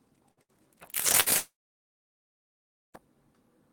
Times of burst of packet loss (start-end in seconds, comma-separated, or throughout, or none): 0.31-0.51, 1.20-1.29